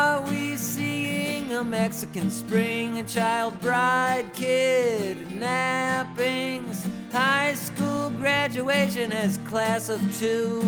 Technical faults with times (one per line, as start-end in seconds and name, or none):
0.00-10.67 clock drift between sender and receiver
0.01-10.63 repeated timing corrections